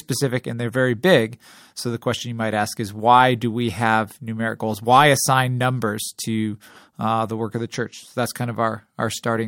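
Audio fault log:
No faults heard anywhere in the speech.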